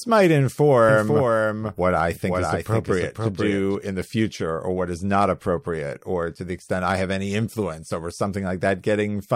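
From 0.89 s to 3.75 s the speech is heard twice: a second full-band copy trails about half a second behind, a few dB quieter, with no reverb tail, and it cuts in and out abruptly. This doubled audio track likely comes from a slower second capture path.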